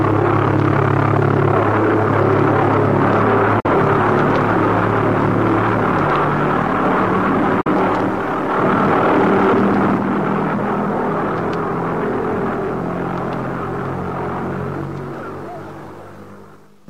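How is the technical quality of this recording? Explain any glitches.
The recording has two brief digital broadcast dropouts. At 3.60 to 3.69 s and again at 7.61 to 7.69 s, the receiver stopped getting usable data, consistent with a single lost or corrupted frame each time, and muted until clean frames resumed. The sound fades out over about 8 ms, leaves a short silent hole, then returns with roughly 43 ms of the programme missing. There is a distinct gap, not a click.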